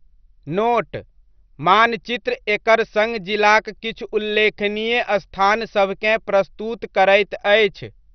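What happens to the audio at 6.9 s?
At 6.9 s the speech carries the same damage heard across the whole clip, most likely MP2 compression at a low rate near 48 kbps. Starved upper sub-bands are shut off, leaving nothing above about 6.2 kHz, and coarse quantisation adds a dull, gurgling graininess.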